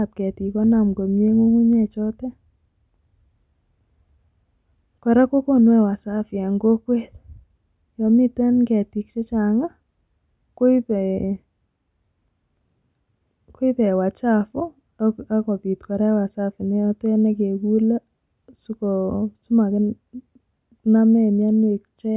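No technical faults can be heard anywhere in this speech recording. Nothing in the audio breaks, stalls or changes in a way that points to a problem in the chain.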